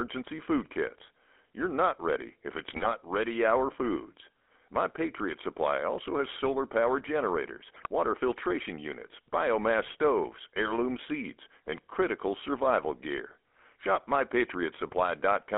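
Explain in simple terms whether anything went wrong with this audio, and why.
Yes, two things went wrong. Throughout, the speech carries the GSM full-rate codec sound of early mobile phones: a buzzy, gravelly roughness, with nothing above about 3.5 kHz. That steady rasp, present everywhere, separates it from simple muffling, which dulls without adding grit.

There are also GSM bit errors, three brief bursts at 2.68–2.89 s, 7.74–7.87 s and 9.80–9.95 s. Corrupted data reached the decoder, so the voice briefly squawks and gargles. Unlike dropouts, which go silent, these bursts make strange, distorted noise instead.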